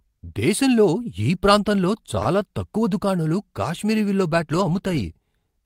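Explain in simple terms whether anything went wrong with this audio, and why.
At 2.22 s, after "దేశంలో ఈ ప్రాంతంలో", there's a short stall from a late packet. A sound holds about 29 ms while waiting. Nothing is lost.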